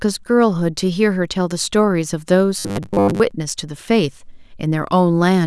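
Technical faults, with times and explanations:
2.59 to 3.32 s: robotic sound from repeated short buffers. The speech becomes a rigid metallic buzz at 100 Hz that loosely follows the syllables. Audio likely arrived too seldom, so roughly half the time a 10 ms stretch was replayed, fixing that pitch.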